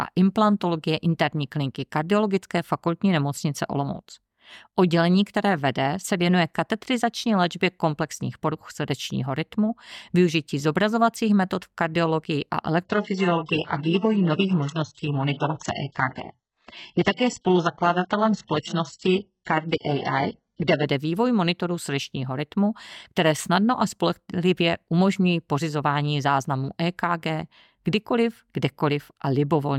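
At 12.85 s, right after "metod v kardiologii a", the speech switches abruptly to an adaptive stream at a lower bitrate. There is no gap. The connection slowed, so the player fetched a much cheaper version. For eight seconds nothing sounds above 8 kHz, and the treble drops away, with codec artefacts. The quality points to HE-AAC at roughly 8 kbit/s. Full quality returns at 20.85 s, before "vývoj monitorů srdečního rytmu".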